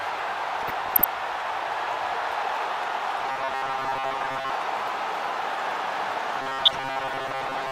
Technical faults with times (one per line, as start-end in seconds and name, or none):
0.61-1.04 DAB burbling
3.19-4.50 robotic sound from repeated short buffers
6.42-7.72 robotic sound from repeated short buffers
6.54-6.87 DAB burbling